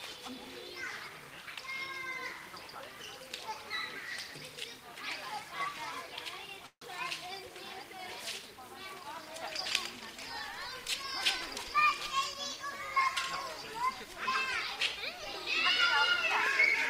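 At 6.66 s a call audio freeze begins and lasts until 6.82 s. The incoming packets likely stalled in transit, and the jitter buffer ran dry. The receiver stretched the last sound into a short buzz or hiss that fades, then gave about 60 ms of silence. About 150 ms were filled in this way. When the audio resumes, it picks up where it stopped. Nothing is lost, but everything after runs 150 ms later.

From 11.55 s to 13.07 s a jitter buffer speed-up follows. The buffer was holding more audio than its target, so the receiver trimmed it back. It cut tiny pitch-period slices, one after another. Over this stretch about 50 ms went missing in total. The audio plays at 103 percent speed with its pitch unchanged. The effect is a small squeeze in timing, short of sounding hurried.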